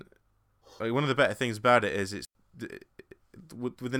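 Right after "things about it is", at about 2.25 s, the sound drops into a clean hole that lasts until about 2.35 s, roughly 100 ms of near silence. That's a digital wireless dropout: the link lost too much data, so the receiver muted with a very quick fade rather than passing on garbage. You get no crackle or noise burst on either side, just a sudden gap before the speech carries on.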